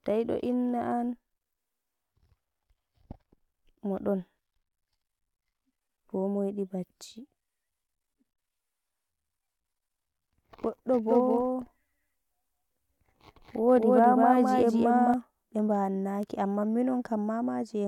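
A speech recording where, from 11.08 s to 15.14 s, everything is heard twice: a second, equally loud copy trails the first by about a fifth of a second, giving a doubling with no reverb tail or room colour, and it cuts in and out abruptly at both ends. This is a doubled audio track, likely from the same signal being captured again through a slower path or two copies left out of alignment in an edit.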